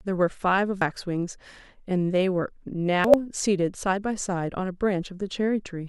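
At 0.82 to 0.91 s and 2.95 to 3.14 s, compressed frames are skipped: the decoder drops whole frames, so the speech jumps ahead by about 200 ms, then 100 ms.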